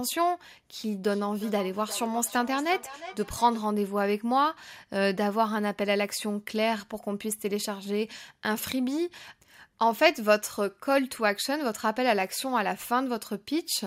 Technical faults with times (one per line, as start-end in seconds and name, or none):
1.05-3.69 feedback echo between two devices